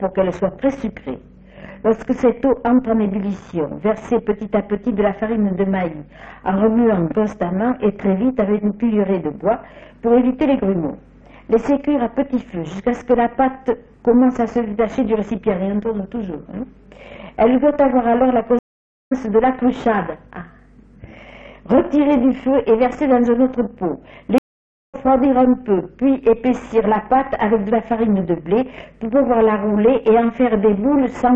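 At 18.59 to 19.13 s and 24.38 to 24.95 s, a stream reconnect drops the audio out for about half a second (524 ms, then 553 ms) while a fresh decoder starts. Each time the sound resumes roughly 0.4 s further on, skipping material. The waveform flatlines and the spectrogram shows a clean blank column.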